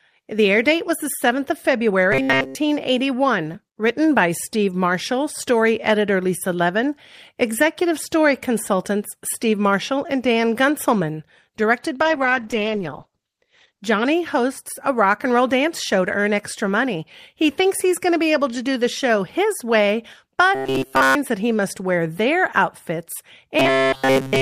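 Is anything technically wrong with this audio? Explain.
Yes, there are two kinds of fault: a robotic buzz that appears three times and one drop in the call's bitrate.

Robotic sound from repeated short buffers occurs from 2.12 to 2.55 s, from 20.55 to 21.16 s, and from 23.59 s through the end of the clip at 24.42 s. The likely cause is audio arriving too late, so the receiver kept replaying a very short stretch, about 7.5 ms, in place of the missing material. In the first and last events essentially all of the sound is replayed material, and in the middle event most of it is. Because the same slice repeats 133 times a second, a rigid, metallic 133 Hz buzz takes over while loosely keeping the speech's outline. A spectrogram shows flat, evenly spaced horizontal harmonics at multiples of 133 Hz in place of gliding pitch contours, and the waveform shows one short shape copied over and over.

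The call bitrate drop runs from 12.0 to 13.89 s. The encoder was cut from 32 kbps to 10 kbps and held near the bottom for about 1.83 s. At that rate it codes coarsely and narrows the bandwidth from 20 kHz to 8 kHz, so the speech turns muffled and rough until the rate recovers. On a spectrogram the content above 8 kHz disappears abruptly, leaving a hard ceiling, and the remaining energy looks smeared and blotchy.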